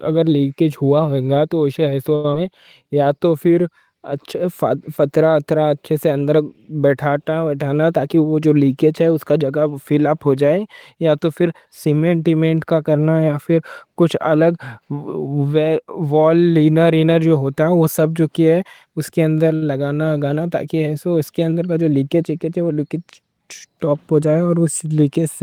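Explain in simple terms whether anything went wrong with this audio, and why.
A few network hiccups show up in this speech clip, all from packets arriving unevenly.

At 2.15 to 2.25 s, right after "ہوا ہوگا تو اُسے", there's a short stall from a late packet. The next chunk of audio hadn't arrived, so the player held the last sound for about 87 ms and then picked up exactly where it left off. Nothing is lost, but that sound is stretched, with a faint buzzy hold. The same thing happens at 19.55 to 19.63 s, between "ہے اُس کے اندر" and "لگانا تاکہ ایسو اس", this time held for about 64 ms.

Right after the first stall, at 2.31 s, comes a short concealed packet loss. About 50 ms of audio never made it in time, and the player patched the gap with a quick continuation of the sound before it, then blended back in. It comes across as a tiny smear or wobble, and a short consonant there can drop out. 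Skipping that stretch also won back part of the delay the stall had just added.

From 2.83 to 3.09 s there's a jitter buffer slow-down. The player wanted more audio in reserve, so it repeated tiny slices of the sound, adding about 42 ms. Speech runs at about 86% speed with the pitch unchanged, so syllables drag a little and may warble slightly.

Jitter buffer speed-up happens twice, at 7.75 to 8.41 s and at 21.60 to 22.23 s. The second one starts just after "تاکہ ایسو اس کے". Here too much audio had piled up, so the player snipped out small pieces to catch up: about 100 ms the first time, at roughly 112% speed, and about 70 ms the second time, at 109%. Pitch stays the same, but the speech sounds slightly rushed.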